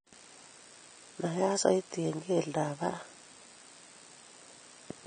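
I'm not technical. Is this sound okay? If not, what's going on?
No. The speech was squeezed hard to save space, most likely by AAC compression, which throws away detail it judges least noticeable. Throughout, everything above about 9 kHz is gone, so the voice sounds dull and muffled, with a smeared, fizzy edge on hissing sounds.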